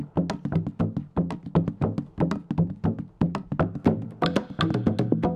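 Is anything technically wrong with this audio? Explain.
No, nothing here stands out as a technical problem, so the audio can be taken as it is.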